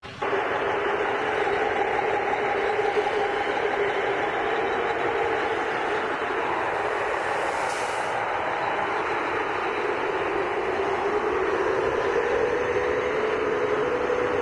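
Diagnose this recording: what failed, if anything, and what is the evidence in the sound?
Nothing in this recording stood out on listening as a failure at any stage of the chain.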